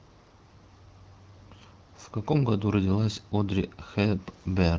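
Nothing goes wrong anywhere in this bit of speech, which comes through an AMR wideband (HD Voice) link at 15.85 kbit/s, a rate where the codec leaves only a light touch on the sound.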